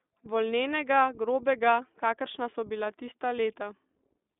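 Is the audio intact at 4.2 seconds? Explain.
No. At 4.2 seconds the speech carries iLBC codec damage, which runs through the whole clip. The codec rebuilds each short frame's excitation on its own, without using the previous frame, and the grain of the result fits 20 ms frames at the 15.2 kbps mode. The band sits at roughly 250 Hz to 3.6 kHz with nothing above 3.7 kHz, so the speech sounds muffled and narrow, with a plainly audible rough, synthetic texture.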